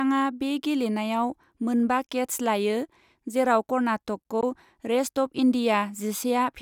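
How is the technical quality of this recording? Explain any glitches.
The speech has two brief gaps. At 2.07 s, right after "बे गेलेनायाव मोन बा", and again at 4.41 s, the sound cuts to silence for about 24 ms, then resumes further along. This is likely a Bluetooth dropout: about 14.5 ms of audio, consistent with a single lost packet, never reached the headphones.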